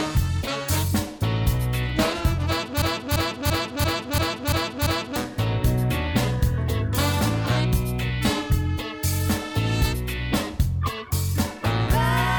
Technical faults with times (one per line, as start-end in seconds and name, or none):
2.82-5.16 broken-record loop